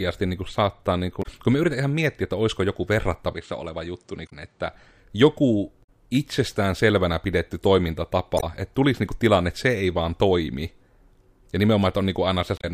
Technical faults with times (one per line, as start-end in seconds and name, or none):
1.19-1.26 damaged data in a compressed stream
3.33-4.74 input switched to a poorer device
4.25-4.33 damaged data in a compressed stream
5.80-5.88 damaged data in a compressed stream
8.36-8.44 damaged data in a compressed stream
12.57-12.64 damaged data in a compressed stream